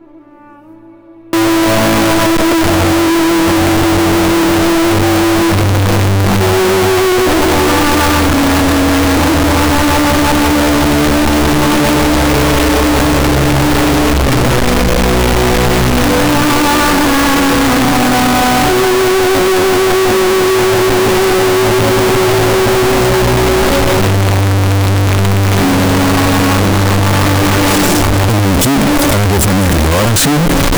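From 1.33 s to the end, the audio turns extremely loud and harsh. It shows the float-read-as-integer fault, likely 32-bit float samples being interpreted as 32-bit integers, so sign and exponent bits dictate each value. On a waveform the trace jumps to a near-square block at an almost fixed, high level, with quiet and loud passages flattened to the same height. A spectrogram fills with dense broadband energy, where background noise is as strong as the wanted sound, yet pitch contours remain traceable.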